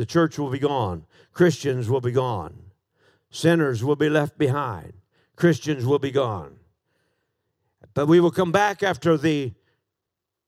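No dropouts, clicks, distortion or other transport or processing faults are audible anywhere in the recording.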